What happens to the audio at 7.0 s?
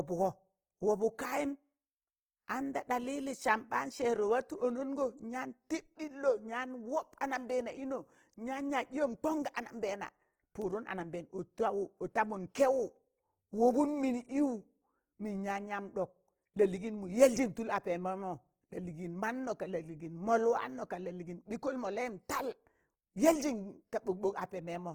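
Opus compression affects 7.0 s, as it does the whole clip. The speech sounds grainy and rough, likely from a low-rate encoder filling starved bands with noise.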